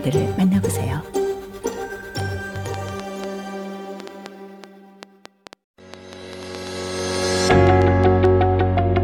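From 2.20 s to 8.26 s a train of clicks runs over the sound at about 4.6 per second, irregularly spaced, some thirty in all and standing well above the signal. The similar pulse shape points to likely interference from nearby equipment or a faulty connection or power supply.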